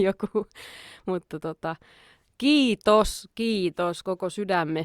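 From 0.57 to 0.65 s, just before "mutta tota", a corrupt frame was decoded: flipped bits in a few consecutive compressed frames were played anyway, so misread gains and codes put energy at wrong frequencies, heard as a brief, fairly quiet chirping burst.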